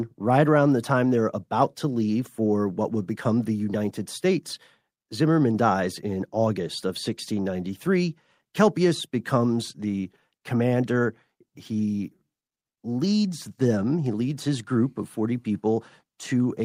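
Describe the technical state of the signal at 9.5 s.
At 9.5 s the speech signal is intact, with no dropout, distortion, glitch or other audible fault.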